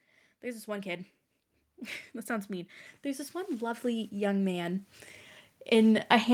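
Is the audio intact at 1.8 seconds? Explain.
No, automatic gain rising is under way: the gain control, finding the input too quiet, ramps up about 14 dB from 0.41 to 5.0 s, swelling speech and background together.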